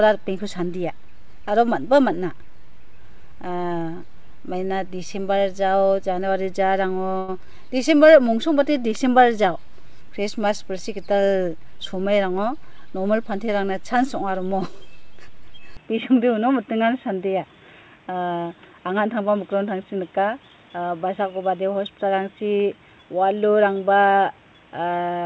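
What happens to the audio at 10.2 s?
Nothing goes wrong at 10.2 s; the audio there is intact, carrying only the steady band limit of the call path, with nothing above 8 kHz.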